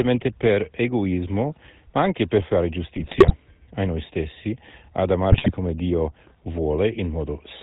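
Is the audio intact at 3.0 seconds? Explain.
No. From 2.94 to 3.33 s, right after "ma anche per fare" and before "a noi stessi ad", there are GSM bit errors: corrupted filter, pitch and gain values make the decoder squawk, pop and gargle. That fits a bit error rate of about 2 percent. Underneath it all, the GSM full-rate codec adds its buzzy, gravelly roughness and cuts everything above 4 kHz.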